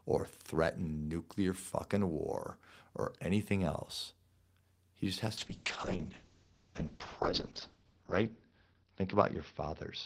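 From 5.39 s, after "just has", a call bitrate drop sets in. The speech turns rough and muffled, and everything above 6 kHz is gone. This fits an encoder starved to about 6 kbps.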